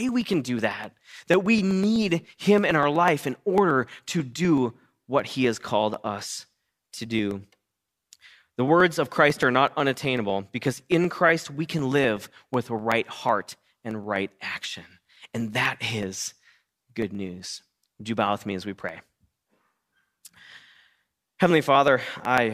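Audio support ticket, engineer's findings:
Periodic USB or driver dropouts throughout the speech, 0.09 s to 22.38 s. Regular ticks every 0.124 s, about 8 per second, some 200 in all, audible only under signal. Each tick marks roughly half a millisecond of audio skipped, not silenced. Probable component: USB bus or audio driver, stalled at a fixed interval by a background task.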